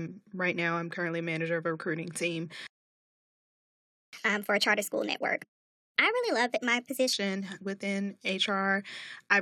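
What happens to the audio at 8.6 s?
Nothing goes wrong at 8.6 s: the speech carries on intact through that moment, with no dropout, click or distortion.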